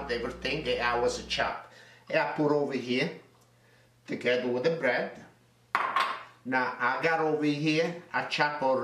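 Mains buzz runs from 0.0 to 1.5 s: sharp switching spikes from the 60 Hz supply leak into the signal path twice per cycle, stacking harmonics up into the kilohertz range. It sits roughly 20 dB below the sound as a steady, raspy buzz.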